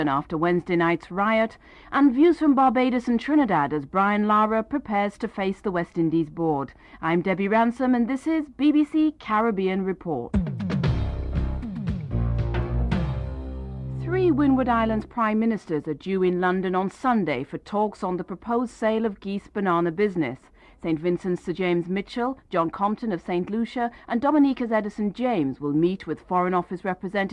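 No technical faults can be heard anywhere in the recording, and the signal stays steady and intact throughout.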